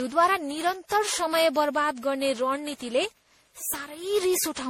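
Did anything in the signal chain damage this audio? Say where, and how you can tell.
Yes, at the codec stage, throughout the speech: generation loss, likely from around ten rounds of MP3 re-encoding at what sounds like 64 kbit/s, with nothing above 18 kHz. Each pass requantises on a shifted frame grid, so the swirl, hollowness and smeared attacks exceed what one encode would leave.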